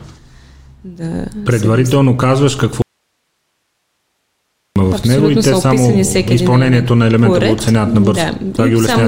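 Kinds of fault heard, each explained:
Audio dropout to a faint residue: The sound cuts out abruptly for nearly 2 seconds, leaving only hiss. The likely cause is signal loss with a live path after the break.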